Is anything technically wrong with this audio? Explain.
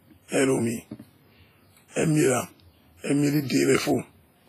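Yes. Throughout the speech there is a ringing, washy quality with a hiss that swells and fades along with the speech, and the top end is cut off cleanly, with nothing above about 15.3 kHz. This is likely WMA compression, heavily applied. The transform codec smears its quantisation noise across tens of milliseconds around each sound and discards quieter spectral detail, which fits a low bitrate of around 24 kbps.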